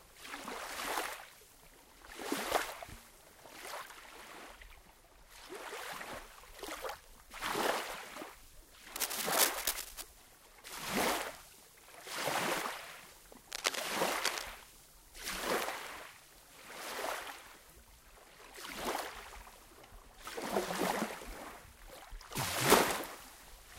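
Just before 9 seconds, at 8.96 s, a burst of cable scratch noise starts and runs to about 10.03 s. It's a dense, uneven scratching and rustling that sits a bit louder than the sound itself. It comes back from 13.51 to 14.44 s, this time at roughly the same level as the sound. The likely cause is a worn cable, connector or control carrying DC being moved, so its contact resistance jumps around and spits noise into the signal.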